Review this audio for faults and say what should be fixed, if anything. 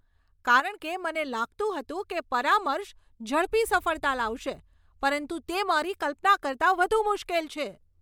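A sudden gain jump at 0.6 s drops the speech and background noise together by about 7 dB, recovering at 0.8 s. The change is instant rather than a compressor's gradual ride, which points to a gain step likely applied without a ramp. Smooth every gain change over a few milliseconds so the level never steps between samples.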